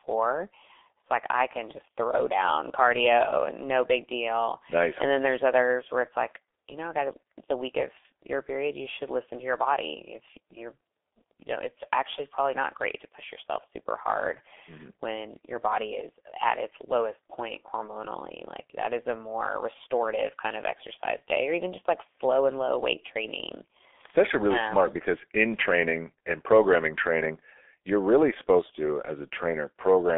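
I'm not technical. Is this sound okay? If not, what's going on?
No. The speech was squeezed through the G.723.1 codec, an old internet-phone method that packs sound into very little data and keeps only the range between 300 Hz and 3.5 kHz. Throughout, voices sound muffled and hoarse, with smeared consonants.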